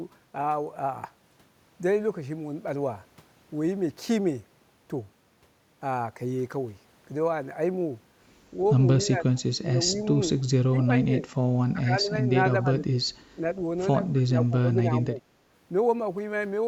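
Speech clip, and the voice keeps dipping by up to about 20 dB at 9.02–10.14, 10.69–11.29, 11.71–12.29, 12.62–12.9, 13.35–13.48 and 14.25–15.26 s, speech suppressed in double talk, likely the echo canceller ducking during crosstalk. At 14.16–14.2 s there's a faint echo leak, a copy 247 ms late and around 30 dB down, likely from loudspeaker pickup slipping past the canceller.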